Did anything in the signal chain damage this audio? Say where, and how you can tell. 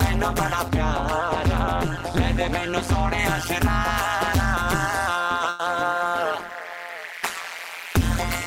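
Yes. An overlap-add ripple runs through the whole clip. The level pumps up and down at a rate of around 150 Hz, heard as a metallic buzz with extra tones around each note. The swing is deep, about 60 dB, so the sound nearly drops out once per cycle. This points to a frame-based processing or codec stage. It cut the audio into windowed frames and rejoined them with an overlap whose gains do not add up to a constant.

A de-emphasis applied wrongly dulls the sound from 0.68 s to 3.19 s. The treble slopes smoothly downward and sits about 10 dB lower at 10 kHz than at 1 kHz. The result is muffled. This fits a filter stage in the call processing or playback path. A treble cut meant to undo pre-emphasis was used on audio that had none, or it was used twice.

A burst of packet loss hits at 5.49 s and lasts until 5.61 s. For about 100 ms the last sound is held and fades away instead of moving on. 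Then the audio resumes further ahead, with about 100 ms missing. This is the network stage. Several packets in a row were lost or arrived too late. The receiver's concealment stretched the previous sound over the gap and faded it down.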